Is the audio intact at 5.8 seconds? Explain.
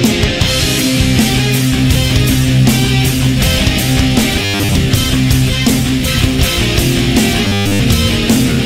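Yes, the audio is intact at 5.8 seconds, with no dropout, click, distortion or other fault to be heard at that point.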